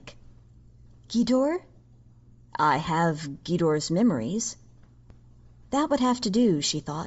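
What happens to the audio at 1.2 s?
A single sharp tick at 1.18 s, broadband and unrelated to the speech, is a bit error spike: one flipped bit makes one sample jump by a power of two, then return. Underneath, the speech has a breathy, grainy top end with noise-like highs, likely Bluetooth LC3 compression at a low bitrate, consistent with around 32 kbps and short 7.5 ms frames.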